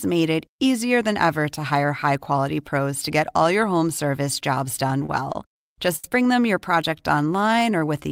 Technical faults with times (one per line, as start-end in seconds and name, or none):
4.79-5.58 repeated stalls (stutter)
5.96-6.06 short stall from a late packet
6.98-8.04 jitter buffer slow-down